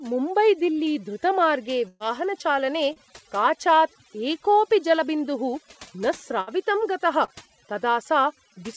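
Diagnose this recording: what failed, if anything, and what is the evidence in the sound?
Throughout, the background drops and breaks up into twinkling specks. This is overdone noise removal in the call processing stage: the suppressor pulls individual frequency bands down whenever they sit near its noise estimate, taking quieter speech detail with them.

At 1.88–2.03 s and 6.41–6.50 s, the sound freezes into a held buzz or fading hiss, then resumes further on. These are bursts of packet loss on the network. About 120 ms and 60 ms never arrived, so the receiver stretched the last sound across each gap.

Brief smears or wobbles occur at 2.93–2.99 s and 7.25–7.31 s. This is short concealed packet loss, where about 30 ms each time missed the decoder. The receiver synthesised a continuation and blended back, over a path band-limited at 8 kHz, which fits G.722 at 64 kbps.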